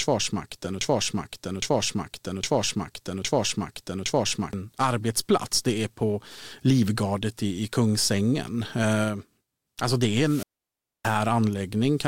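From the very start until 4.53 s, the same 0.81 s fragment of speech repeats exactly, back to back, five times before the talk moves on with "arbetsplats det är på". This broken-record loop most likely comes from a stalled player or stream resending its last buffer, so the speech that belonged there is lost.

At 10.23 s, just after "det är", hiss briefly swells, then the audio drops into near silence for about 0.62 s before speech returns by 11.21 s. This is a wireless microphone squelch dropout: the FM signal faded and the receiver's squelch muted the output.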